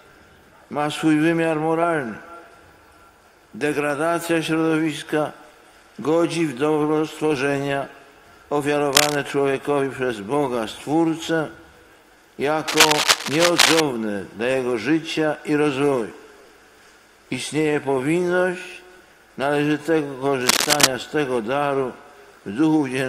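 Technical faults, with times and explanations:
8.93–9.15 s, 12.67–13.80 s and 20.41–20.87 s: cable scratch noise, dense uneven rustling bursts a few dB above the sound, likely from a worn connector's contact resistance fluctuating while moved.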